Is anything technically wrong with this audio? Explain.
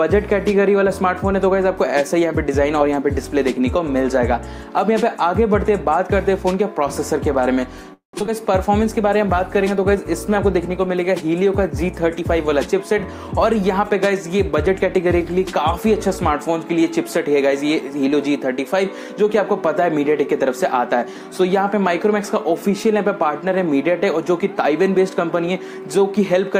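Yes, there are four network faults.

From 7.93 to 8.15 s the audio stalls: the last sound carries on as a fading buzz or hiss, then about 120 ms of silence, before resuming where it stopped. This is likely a call audio freeze, where delayed packets emptied the jitter buffer and the receiver stretched out the last sound until they arrived.

Right after, at 8.19 to 8.22 s and 8.26 to 8.29 s, there are two brief smears. This is short concealed packet loss: about 20 ms of audio failed to arrive each time, and the receiver covered the gap by continuing the preceding sound before blending back in.

From 12.2 to 15.07 s the audio runs slightly fast, at about 106% speed with the pitch unchanged, so it sounds hurried. This is a jitter buffer speed-up. To reduce the extra buffered delay, the receiver removed many short pitch-period slices, about a fifth of a second in total.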